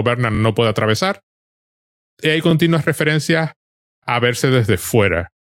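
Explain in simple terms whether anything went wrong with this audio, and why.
Three quick stutters come from a repeated buffer: the player didn't get fresh audio in time, so it replayed its last tiny 23 ms chunk. That happens twice at 0.35–0.40 s before "puede atravesar", and once each at 2.51–2.53 s before "referencias a verse" and 4.04–4.06 s before "a verse", with nothing dropped.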